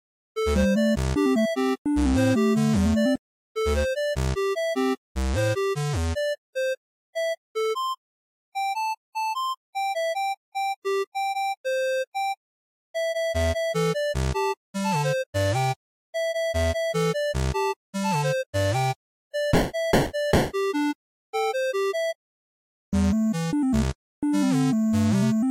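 No technical faults can be heard anywhere in the recording, and the signal stays steady and intact for its whole duration.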